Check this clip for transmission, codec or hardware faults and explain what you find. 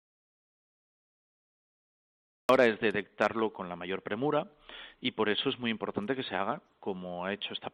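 One fault is present: an audio dropout to silence, already under way when the clip begins and lasting until 2.49 s. That stretch is silent with no room tone, and sound enters abruptly mid-flow, likely from a lost input link while the recorder kept writing.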